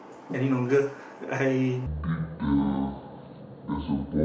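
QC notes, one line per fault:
1.86 s to 4.25 s, section at the wrong speed: from here to the end the speech drops to about 0.58 times its proper rate, so the voice turns slow and deep, roughly ten semitones down. Likely a resample or playback clock mismatch on that segment.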